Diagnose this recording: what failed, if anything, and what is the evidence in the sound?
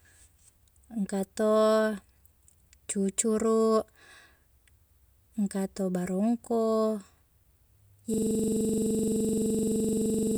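At 8.14 s a system hang loop sets in at the driver or buffer stage. One 42.7 ms slice of speech repeats exactly until the end, a 23.4 Hz stutter that fits a stalled 2048-sample ring buffer. The waveform shows identical blocks, and the spectrogram shows evenly spaced vertical stripes.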